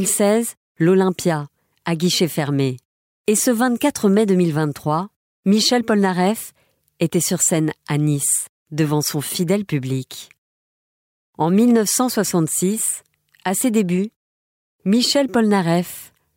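Nothing technical stood out on listening to this speech recording.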